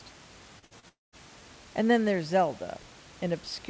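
From 0.59 to 0.65 s there is a short concealed packet loss. About 30 ms of audio never arrived, and the decoder extended the preceding sound for roughly 33 ms before blending back. It is heard as a brief smear in the sound.

Immediately after, from 0.65 to 0.74 s, comes a burst of packet loss. About 60 ms went missing, and concealment held the last sound for around 54 ms while fading it. The result is a short held buzz or hiss, and the sound then resumes slightly further on.

A second short concealed packet loss follows at 0.80 to 0.86 s, again replacing about 30 ms with synthesized continuation, which gives another brief wobble.

From 0.89 to 1.15 s the sound cuts out for about a quarter of a second. A fading continuation gives way to roughly 180 ms of near-silence, with only the room noise, about 23 dB below the speech, remaining. The audio then returns without the lost stretch. This is likely a long network dropout.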